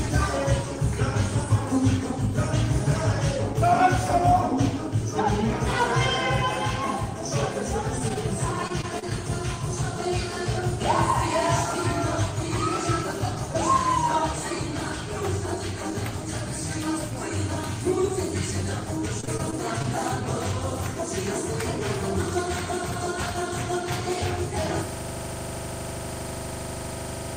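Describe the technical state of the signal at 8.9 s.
Repeated packet loss (robotic sound) runs from 8.68 to 9.13 s. Several short dropouts, the longest about 27 ms, follow one another closely. Each is patched by stretching the preceding sound, so the passage turns choppy, with small pieces missing.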